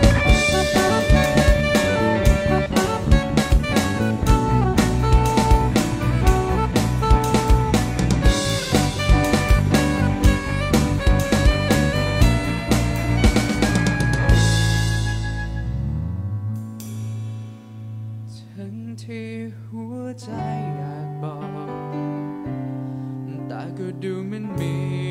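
No technical faults can be heard anywhere in the recording, and the signal holds steady throughout.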